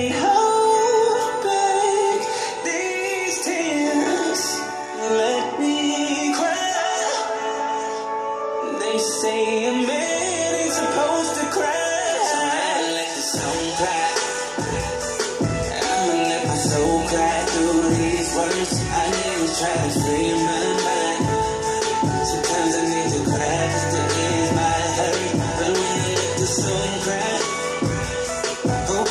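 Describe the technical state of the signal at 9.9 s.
At 9.9 s the signal is intact, with no dropout, distortion, clipping or other fault audible at that point.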